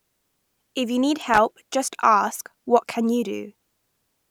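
At 1.34 s, right after "you need", an irregular burst of crackle and scratching cuts into the speech. It lasts about 0.2 s and clears by 1.54 s, just before "just ask what can". This is loose connector crackle. A worn or dirty contact in the signal path is making and breaking as it moves. Each break chops the signal off for an instant. The rapid, uneven interruptions come through as harsh scratchy noise over the speech.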